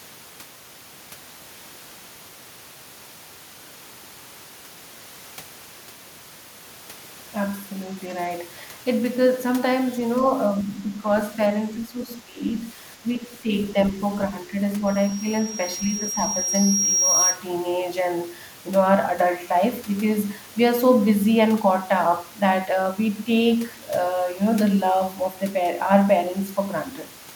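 From 10.64 to 11.07 s the speech dips in level by about 5 dB. It dips again from 11.78 to 12.39 s, this time by about 15 dB. A shallower dip of about 5 dB follows from 13.02 to 13.5 s. The likely cause is speech suppressed in double talk. Both ends seem to talk at once, and the echo canceller cannot tell this talker from returning echo. So it turns the speech down in pieces.

At 14.86 s a loudspeaker feedback squeal begins. A single tone at 5.6 kHz swells over about 2 s, reaching about 5 dB above the speech. The microphone is hearing its own loudspeaker, and the loop gain at that frequency exceeds one. The howl lasts until 17.41 s. Inside it, from 15.93 to 16.18 s, the speech drops briefly by about 5 dB, likely another brief suppression of the same double-talk kind.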